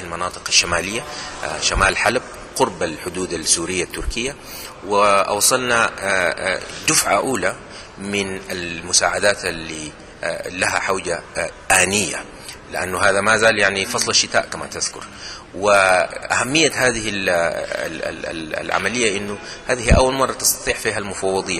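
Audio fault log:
17.61 s, damaged data in a compressed stream: corrupted bytes make the decoder lose frame sync, giving a brief glitch; a broadband smear on the spectrogram and a jagged waveform break.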